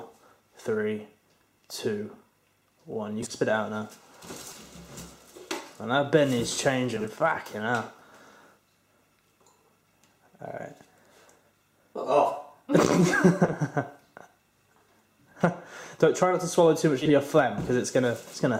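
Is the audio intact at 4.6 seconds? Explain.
No. Frames out of order run from 4.48 to 4.57 s, ending just before that moment. Two adjacent 40 ms blocks, likely four frames each, play swapped, giving a brief garbled flutter. Unlike a dropout or repeat, no time is lost or duplicated.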